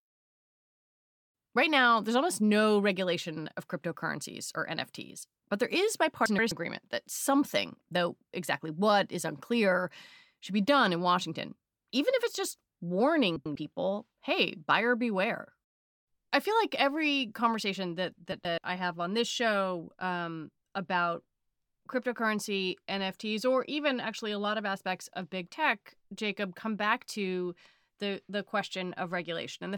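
Frames out of order at 6.26–6.52 s (after "but there is"), 13.36–13.56 s, and 18.32–18.58 s (after "like every conversation that"). Each time, two adjacent runs of about 128 ms (96 ms at 13.36 s) play in swapped order. This causes a garbled flutter. Unlike dropouts or repeats, nothing is lost or duplicated.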